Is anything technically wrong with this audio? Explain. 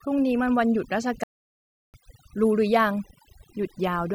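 Yes, there are two faults. Overdone noise removal runs throughout. Frequency bands near the noise level get cut, leaving a near-silent, twinkling background. A playback stall hits from 1.23 to 1.94 s. The speech cuts to silence for about 0.7 s, then resumes, likely because the player ran out of data.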